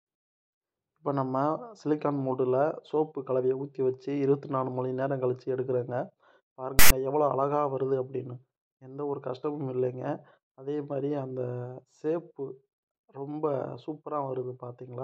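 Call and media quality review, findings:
File tags played as audio, 6.79 to 6.91 s. Hard-edged 120 ms burst. Loud, one-sided rasp, then dead silence. Probable component: file parser or demuxer. Text metadata read as samples; byte values give the lopsided rasp. Zero padding decodes to silence. Fix: skip the tag block before decoding.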